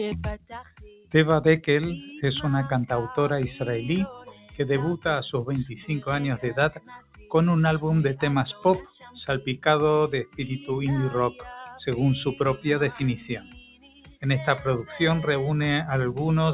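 Noise suppressor applied to music or sounds, throughout the clip: a suppressor tuned for speech stays active on this audio, treats sustained tones, ambience and reverberant tails as noise, and pulls them down while transients pass. Level swings of roughly 10 dB make the sound pump and thin, all heard through a band-limited call path with nothing above 4 kHz, which fits a G.711 mu-law channel.

Sound cut by the noise suppressor at 0.37–1.14 s, 4.15–4.59 s, 5.69–5.89 s, 6.71–7.31 s, 8.99–9.15 s, 10.25–10.40 s and 13.34–14.24 s: in these stretches the suppressor judges the held or decaying material to be noise and attenuates it harder than the rest. The drops reach about 12 dB at 4.15, 5.69 and 8.99 s, about 15 dB at 10.25 s, about 16 dB at 0.37 s, and about 17 dB at 6.71 and 13.34 s. The longest dip lasts roughly a second. Tails sink or are cut short while onsets survive.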